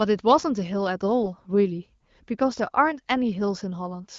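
From 1.24 to 1.33 s there's a short burst of AMR bit errors: for roughly two frames the less protected bits got corrupted, so pulse positions and the fine pitch, gain and spectral detail go wrong. The level holds, but it turns briefly hoarse and gargly over the light, clean-ish AMR-WB coding at 12.65 kbit/s.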